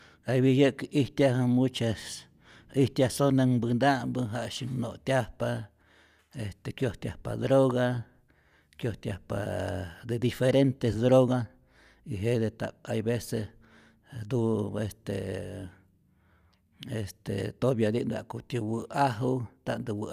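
No technical faults can be heard anywhere in the speech recording; the signal stays steady and continuous throughout.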